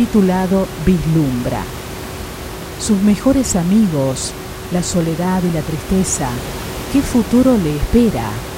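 Listening to the speech, with its room noise sitting about 12 dB beneath it, nothing technical stood out.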